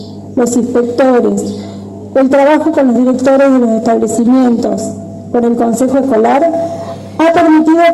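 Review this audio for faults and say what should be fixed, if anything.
No faults; nothing needs fixing.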